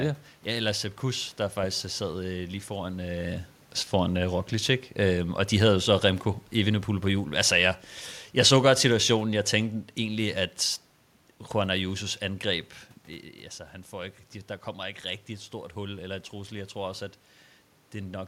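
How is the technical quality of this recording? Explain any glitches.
One system glitch stands out, a stretch of automatic gain falling in the speech. The room noise and the level shifts near 3 s and 12.5 s, where the talker moves relative to the microphone, belong to the recording itself.

From 6.55 s to 10.28 s the automatic gain control, reacting to input it judged too loud or too noisy, steps its gain down gradually by about 4 dB. The speech and the room background sink together, which separates it from a talker simply moving away.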